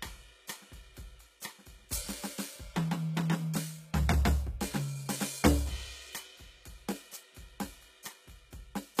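A music clip with HE-AAC compression throughout. Nothing sounds above about 14.9 kHz. The treble reaches high but is rebuilt from copied lower bands, so high sounds turn gritty and metallic. The plain damage fits a bitrate near 20 kbps, likely from HE-AAC encoding.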